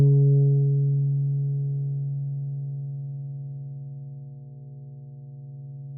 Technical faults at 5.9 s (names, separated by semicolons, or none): mains hum